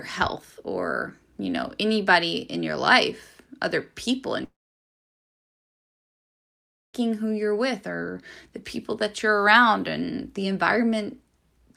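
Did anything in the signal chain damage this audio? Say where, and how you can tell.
Yes, at the network stage. From 4.44 to 6.95 s the speech breaks off into a brief fading buzz, then silence. This is likely a long network dropout, losing about 2.5 s.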